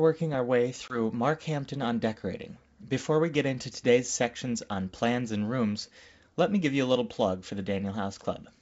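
A speech clip carried over a wideband G.722 link shows packet loss on an ADPCM call at 0.88 s, just after "our way". A hole of about 20 ms, consistent with roughly one lost packet, is filled with silence and has hard edges. The decoder's adaptive predictor and step size then no longer match the sender's, so the returning speech comes back with some distortion until the state realigns by about 0.99 s.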